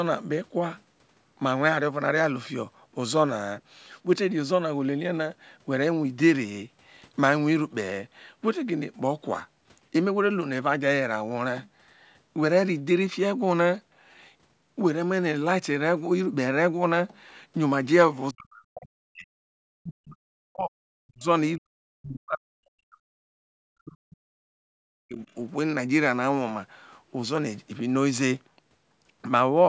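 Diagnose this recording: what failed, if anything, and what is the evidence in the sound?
Speech suppressed in double talk, in call processing. Speech drops about 40 dB at 18.32, 19.63, 20.99, 21.57, 23.6 and 25.06 s. The echo canceller likely ducked both sides during overlapping talk.

Background gated by the echo canceller, also in call processing. At 24.67 s the room sound falls about 36 dB for roughly a tenth of a second. It returns once the canceller releases.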